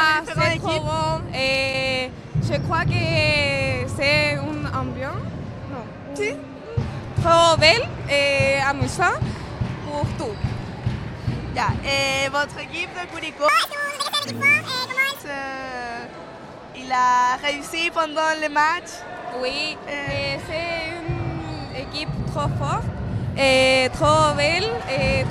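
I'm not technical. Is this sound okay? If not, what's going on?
No. From 13.49 to 15.20 s there is a section at the wrong speed. That stretch plays about 1.82 times too fast, so it sounds hurried and nearly an octave higher, then snaps back. This was likely caused by playback or editing on a mismatched clock.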